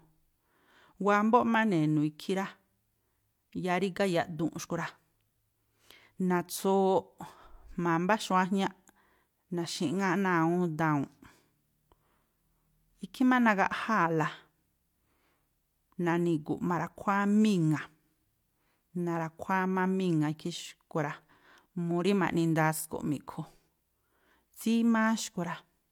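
Speech throughout, and nothing in the signal stands out as a technical fault at any point in the recording.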